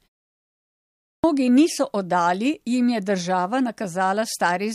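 Clipped start after a pause, from 0.77 to 1.24 s: in this speech recording, the sound after the opening 0.77 s of silence is swallowed for about 0.47 s, so "niso oddali jim je" bursts in abruptly without its first sounds. The output device appears to have gone to sleep during that silence and needed close to half a second to wake and lock onto the signal again, discarding everything that arrived meanwhile.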